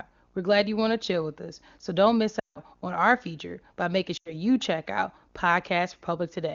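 At 2.39 s, after "us so don't miss", lost AMR speech frames (about 160 ms, fitting eight 20 ms frames) make the decoder repeat stale pitch with falling gain: a quick drop to near silence within two frames. It repeats more briefly at 4.17 s, before "check out". Spectrograms show smeared harmonics; waveforms taper.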